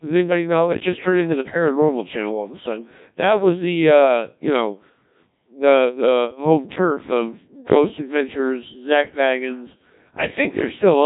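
Speech throughout has been passed through the Codec 2 vocoder, with heavy damage consistent with a very low rate of about 1.3 kbit/s. The encoder keeps only pitch, voicing, energy and a coarse spectral envelope, then the decoder rebuilds the voice from sine waves instead of the original waveform. The result is a robotic, buzzy voice with nothing above 3.8 kHz.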